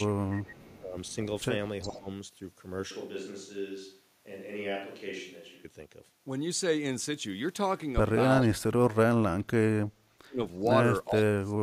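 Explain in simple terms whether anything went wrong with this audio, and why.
An echo canceller likely struggled when both sides talked at once (speech suppressed in double talk), briefly turning the voice down or cutting it out at about 0.03, 0.79, 1.88, 8.44, 9.94 and 11.07 seconds. The last three drops are the deepest.

The far side's loudspeaker likely let sound back into its microphone (echo leak), so a faint copy of the voice returns about 0.42 seconds late, from 0.35 to 1.15 seconds and again around 1.8 to 2.0 seconds.

From 2.91 to 5.65 seconds the recording likely switched to a distant microphone, so the voice suddenly turns quieter, hollow and roomy, with more background noise, before snapping back.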